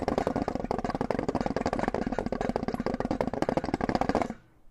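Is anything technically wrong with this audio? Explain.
No, nothing technically wrong can be heard here.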